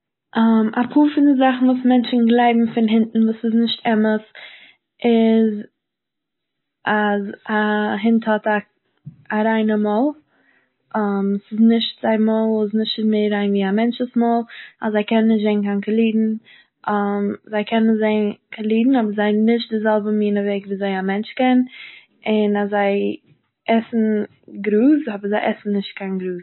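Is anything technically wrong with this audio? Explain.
Yes. Throughout the speech, the sound is watery and swirly, with plainly audible MP3 compression damage. This is likely from an encoder starved of bits, which fits a bitrate around 24 kbps. It removed everything above 4 kHz and zeroed weak frequency lines frame by frame. A spectrogram would show a flat ceiling at 4 kHz with blotchy, flickering gaps below it.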